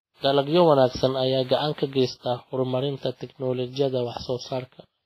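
Throughout the speech, a hard ceiling near 15.2 kHz appears on the spectrogram, with smeared, watery swirls below it. This layered coarseness likely comes from transcoding between lossy codecs, a low-bitrate MP3 re-encoded to WMA, which fits roughly 24 kbit/s each.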